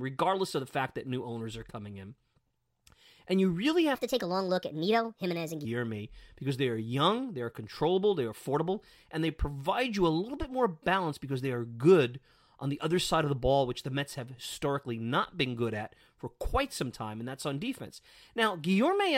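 Between 3.95 and 5.65 s speech turns hurried and about five semitones higher: a section at the wrong speed, 1.34 times fast, likely from a clock mismatch.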